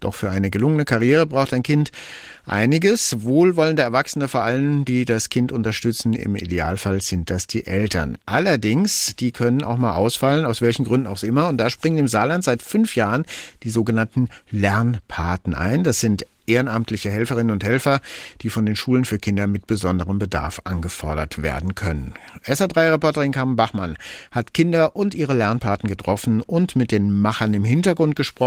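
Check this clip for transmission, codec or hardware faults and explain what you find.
Nothing here counts as a fault: the speech keeps its full audio band through Opus voice compression, with only light coding traces of the sort that fit a moderate hybrid-mode rate around 20 kbps.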